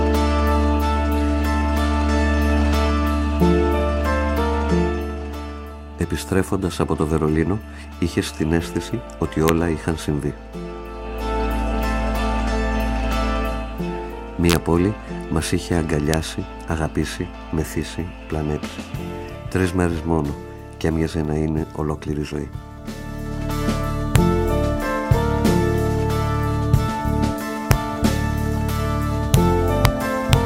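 Integer overflow produces sharp, violent cracks at 9.48, 14.50 to 14.56, 16.14, 24.16, 27.71, 29.34, 29.85 and 30.33 s. Loud peaks exceed the integer limit by at most about 1 dB and wrap to the opposite sign instead of flattening, which makes these cracks far harsher than clipping.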